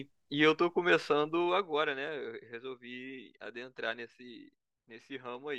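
A speech recording in which a fade down of roughly 10 dB, running from 1.37 to 1.86 s, is applied in coarse steps instead of a smooth ramp, producing zipper noise. Each jump in gain puts a tiny click into the signal, and at around fifty steps a second these merge into a ticking buzz under the speech. On a waveform the envelope descends as a staircase. A spectrogram shows thin, evenly spaced vertical lines of broadband energy across that half-second.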